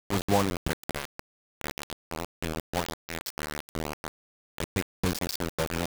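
From start to finish the speech carries a coarse, grainy distortion that tracks the signal, with the error nearly as loud as the speech itself. Quiet passages break into gritty sputter, most likely from low bit depth without dither, consistent with rounding to about 3 bits.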